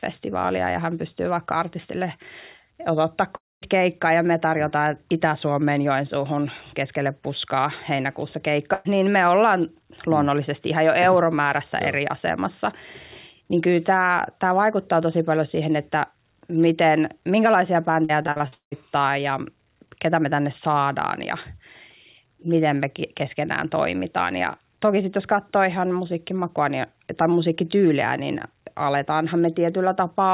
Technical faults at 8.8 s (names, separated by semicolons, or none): burst of packet loss